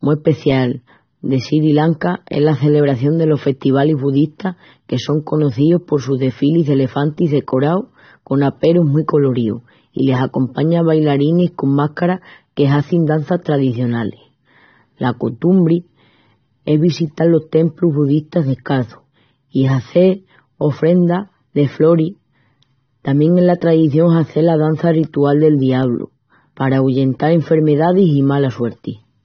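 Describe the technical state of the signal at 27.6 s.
At 27.6 s the speech is still passing through a starved AAC compression stage, as it is for the whole clip, likely AAC-LC at a rate near 24 kbps. Starved of bits, the coder discards everything above 6.3 kHz and thins the bands below it, leaving the sound dull, smeared and fizzy around sibilants.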